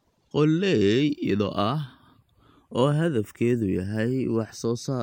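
Channels drifting apart runs throughout the speech. The left and right channels appear to come from two devices on separate clocks that disagree by something like 30 parts per million, so the offset between them creeps steadily upward, reaching only a small fraction of a millisecond by the end. Folded to mono, that sliding delay drags comb-filter notches slowly across the spectrum, heard as a gradually shifting flanging on the sound.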